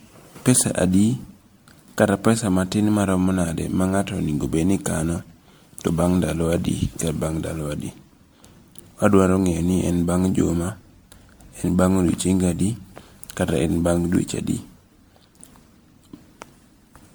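Generation loss runs through the whole of this speech clip, leaving it swirly, smeared and hollow, with softened consonant attacks and no content above about 19.9 kHz. That is more damage than a single encode near 100 kbit/s would explain. The likely cause is repeated MP3 decoding and re-encoding, around seven passes. Each pass requantised the audio on a shifted frame grid, so its noise and spectral holes piled onto those left by earlier generations.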